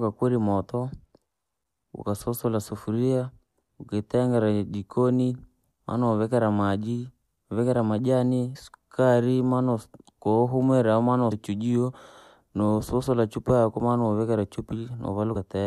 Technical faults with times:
8.55-8.57 damaged data in a compressed stream
11.31 damaged data in a compressed stream
15.35 damaged data in a compressed stream

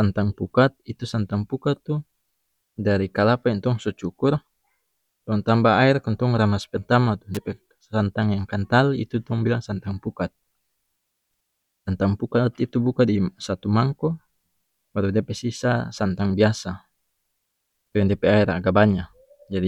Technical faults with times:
7.35-7.37 electrical switching spike

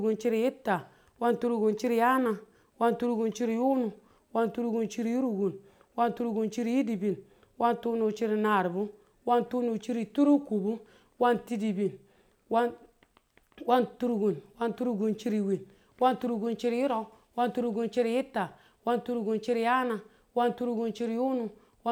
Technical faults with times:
none

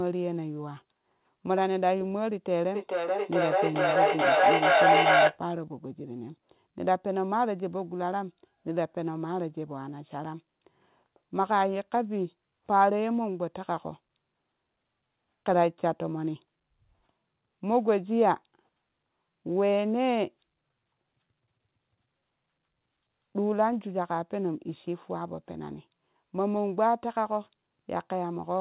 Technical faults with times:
2.74-5.43 feedback echo between two devices

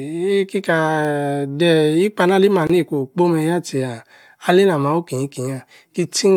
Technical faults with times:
2.67-2.70 gap at a join of encoded pieces

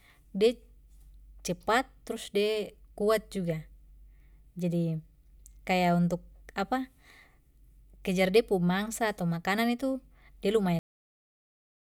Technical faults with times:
10.79-11.98 cut-off end

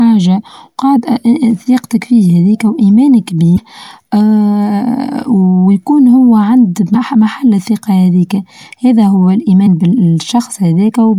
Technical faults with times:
3.54-3.59 damaged data in a compressed stream
6.91-6.96 damaged data in a compressed stream
9.63-9.67 damaged data in a compressed stream

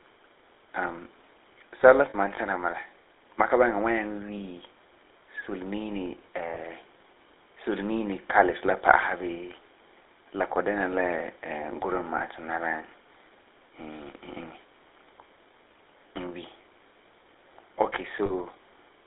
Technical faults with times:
0.00-19.06 GSM full-rate codec
2.10-2.15 lost GSM frames
4.38-4.41 lost GSM frames
6.54-6.59 lost GSM frames
12.18-12.22 lost GSM frames
18.26-18.33 lost GSM frames

